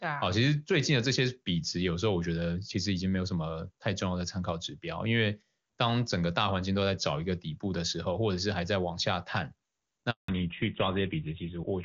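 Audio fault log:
10.10 to 10.28 s, handover gap: the speech cuts off abruptly and the line goes completely silent for about 180 ms, because no speech frames arrived while the call was passed from one network to another. It differs from ordinary packet loss or concealment, which leaves smeared or buzzy fill, because nothing at all is heard here. It also differs from a pause in the talking, because the sound fades within a few tens of milliseconds and does not trail off naturally.
10.28 to 11.84 s, fallback to narrowband: when the sound returns, everything above 4 kHz is gone and stays gone to the end, because the new link carries GSM full rate at 13 kbit/s in place of HD Voice at 23.85 kbit/s. Before the gap the wideband codec gives clear speech with little or no codec damage. After it the speech turns muffled and rougher. A filter or a bad microphone would not make this change, since the band drops at one point, right after a dropout, and never comes back.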